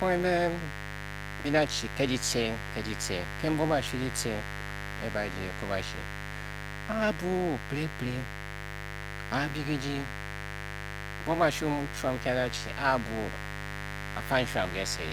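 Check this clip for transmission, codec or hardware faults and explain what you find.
The recording carries one hardware fault, a mains buzz that runs under the speech from start to finish. Its spectrogram shows evenly spaced horizontal lines at multiples of 50 Hz, climbing well into the several-kHz range, present even in pauses. On the waveform it appears as a train of sharp spikes every 10 ms. A dimmer, rectifier or unshielded lead is injecting switching spikes twice per 50 Hz cycle, and at roughly 10 dB below the speech it reads as a steady, raspy buzz.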